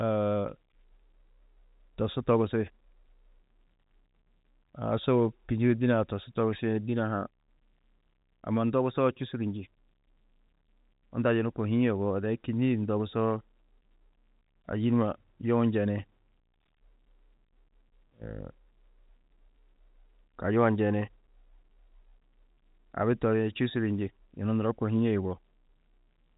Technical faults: none

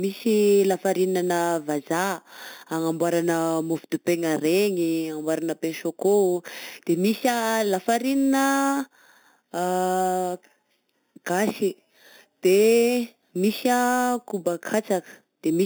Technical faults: imaging from sample-and-hold upsampling

